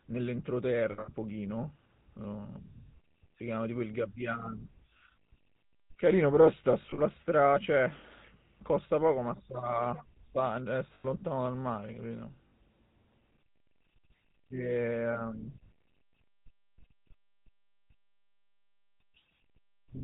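Throughout, the speech has the buzzy, gravelly roughness of the GSM full-rate codec, consistent with its 13 kbps rate. A pulse-driven vocal-tract model replaces the natural excitation and cuts everything above 4 kHz. This is grainier than a simple telephone band-limit, which would only muffle the sound.

Lost GSM frames occur at 0.92 to 1.11 s, 4.90 to 5.10 s, 6.82 to 7.01 s, 10.95 to 11.06 s and 12.48 to 12.52 s. Each gap is patched by repeating the last good frame, giving a brief metallic ring rather than silence or a click. The longest gaps are the spread-out bursts, each around 100 to 140 ms in total.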